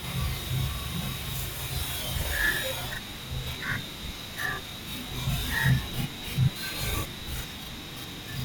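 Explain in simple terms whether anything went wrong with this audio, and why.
Something did go wrong: a channel delay (doubling) runs through the whole clip. One channel arrives 40 ms late, and when both are mixed into one, each sound plays twice at equal loudness, giving the speech a doubled, slapback quality from start to finish.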